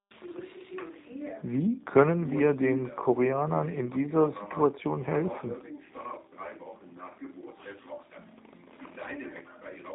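From start to finish the speech carries plainly audible G.729 codec damage. The sound is rebuilt from a vocal tract filter, a pitch predictor and a sparse set of pulses, which fits an 8 kbit/s G.729A stream, so voices come out rough and faintly synthetic. A spectrogram shows a hard ceiling with nothing above 3.8 kHz, and harmonics look smeared between frames, while the waveform keeps its envelope but loses fine detail.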